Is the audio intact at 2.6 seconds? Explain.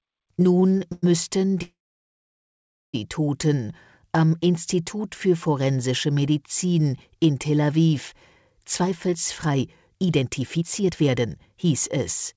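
No. A call audio freeze runs from 1.62 to 2.96 s. The sound briefly continues as a fading buzz or hiss, then goes silent. It then resumes where it stopped, likely after a jitter buffer ran dry.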